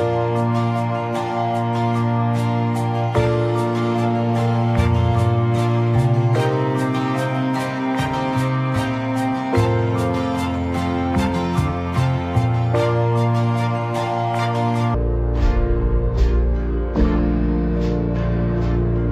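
From 14.94 s to the end, the audio drops to half speed and falls a full octave, with a faint mirrored copy in the upper spectrum. This is stereo read as mono: alternating left and right samples were played back as one channel.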